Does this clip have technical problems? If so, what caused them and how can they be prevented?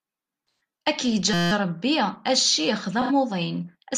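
Yes. AAC frame loss with concealment occurs at 0.51 to 0.60 s and again at 3.01 to 3.11 s. Missing stretches of about 128 ms and 85 ms, which fit three and two lost frames, were patched from the last good spectrum, leaving brief smeared, noisy, phasey patches in the speech. Protecting the stream with error correction, redundancy or a more reliable transport prevents these dropouts.

A system hang loop runs from 1.34 to 1.52 s. The computer or driver stalled while the audio hardware kept replaying one 5.8 ms slice of its ring buffer, roughly 31 times, which fits a 256-sample buffer and produces a steady buzz at about 172 Hz. Fixing the underlying driver or system freeze, and having the audio path output silence when it stops receiving data, prevents this.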